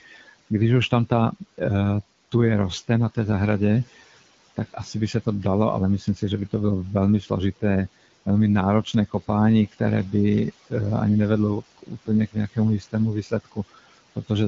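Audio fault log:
throughout, noise suppressor artifacts: the suppressor turns down bands it judges steady noise by about 16 dB frame by frame, so the background dips between phrases.
0.01–0.51 s, 6.0–6.53 s (after "se to dalo ale"), 7.22–7.63 s (after "bylo velmi"), 11.6–14.3 s, speech cut by the noise suppressor: speech mistaken for noise drops by up to about 18 dB, leaving sounds swallowed and faint.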